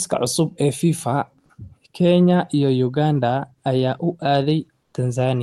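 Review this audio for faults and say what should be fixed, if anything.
Comfort noise in place of the background, from 4.83 to 4.93 s: for about 100 ms near the end of this speech clip, the quiet room tone turns into a smooth, featureless hiss roughly 1 dB quieter than the background around it. The background sits about 53 dB below the loudest speech, so a voice detector treats this stretch as silence. The sender then likely stops transmitting under Opus discontinuous transmission, and the receiver fills the gap with synthetic noise shaped only roughly like the real background. The Opus call path itself carries content up to about 12 kHz. To prevent it, disable DTX on the sending side, or lower the voice detector's threshold so quiet background keeps being sent.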